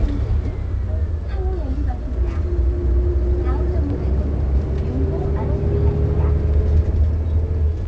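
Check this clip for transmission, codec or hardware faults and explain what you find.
No transmission, codec or hardware faults found; the sound has come through a WebRTC call path and has nothing above 8 kHz, which fits a wideband call codec such as G.722.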